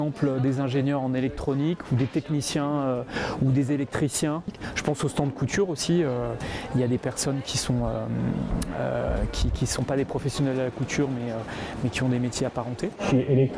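No technical faults can be heard anywhere in the recording. Nothing in the audio points to a dropout, glitch or other playback problem.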